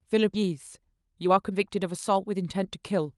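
At 0.33 s playback makes a skip ahead: roughly 0.7 s of speech was discarded and the two sides are joined with no fill, so a chunk of the utterance vanishes abruptly. The waveform shows an unbroken splice, and the spectrogram shows formants and harmonics jumping discontinuously at one instant.

From 0.42 s to 3.17 s a jitter buffer speed-up follows. The receiver, holding more audio than it aims for, trims many short pitch-period slices, about 300 ms in total, so speech runs at 111% speed with unchanged pitch and sounds hurried. Syllables appear compressed in time on the spectrogram while harmonic spacing stays the same. Throughout, the Opus call path's content stops near 12 kHz.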